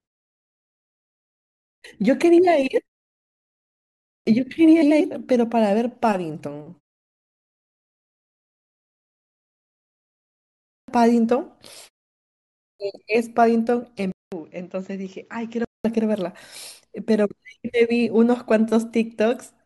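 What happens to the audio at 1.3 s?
A clipped start after a pause runs from 1.25 to 1.82 s. After 1.25 s of silence, the output path had gone idle and needed about 0.57 s to wake, so the opening of the speech is swallowed and it begins abruptly, missing its first sounds.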